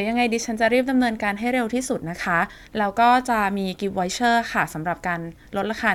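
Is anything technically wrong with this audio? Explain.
No, nothing technically wrong can be heard in this speech recording. No technical problem stands out at any point in the clip.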